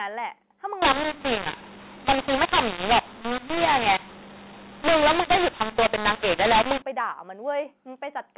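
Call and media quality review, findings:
mu-law and A-law mixed up, 0.82–6.82 s. Harsh, distorted speech; pauses filled with noise. Probable component: G.711 decoder reading A-law samples as mu-law. Companding curves differ, so levels scramble and near-silent samples lift well above zero.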